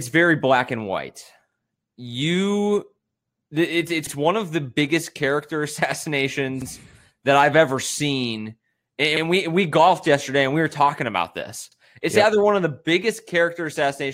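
Overlapping chunks at 4.07–4.12 s, after "it's it's", at 6.62–6.67 s, before "that I've ever seen", and at 11.72–11.77 s, after "were talking about this". The speech was handled in 2.5 s chunks that each begin before the previous one ends, so about 50 ms plays twice at each join, heard as a brief stutter.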